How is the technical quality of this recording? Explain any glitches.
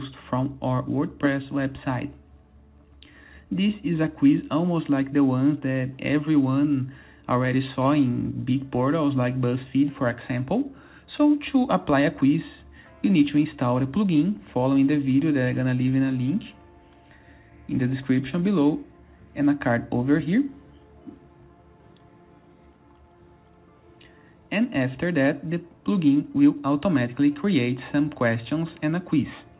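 No glitches are audible.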